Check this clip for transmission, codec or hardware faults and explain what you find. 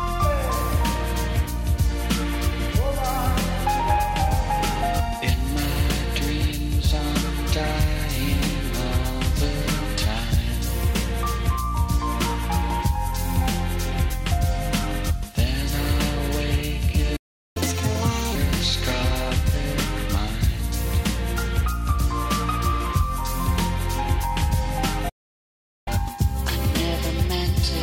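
Two playback stalls can be heard, each followed by a stretch of catch-up at higher speed.

Playback stall, at 17.16 to 17.57 s and again at 25.09 to 25.88 s. The sound cuts out mid-flow into silence, for about 0.39 s the first time and about 0.77 s the second, then resumes. The likely cause is the player running short of buffered data, or its audio thread being blocked, so nothing reached the output until it recovered.

Catch-up at higher speed, at 17.57 to 18.35 s and from 25.88 s to the end. After each gap the player resamples its backlog to play it faster and win back the lost time, so speed and pitch rise together. The first stretch runs at 1.5 times normal speed, roughly a fifth higher in pitch. The second runs at 1.15 times, about a whole tone sharp, and lasts until the clip ends.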